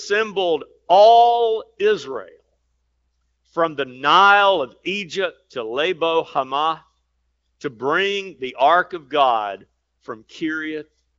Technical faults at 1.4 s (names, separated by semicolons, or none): none